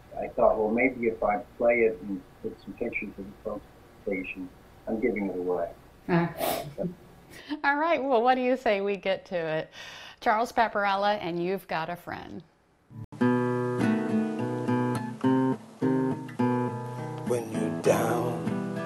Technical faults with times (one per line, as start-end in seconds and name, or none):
13.04-18.86 input switched to a poorer device